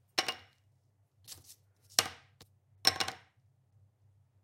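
Compressed frames skipped at 2.42 s: the audio leaps forward by roughly 200 ms, which fits about ten consecutive frames of 23.2 ms each being lost from the file or rejected by the decoder as damaged. The decoder carries on from the next good frame, so a stretch of sound simply vanishes.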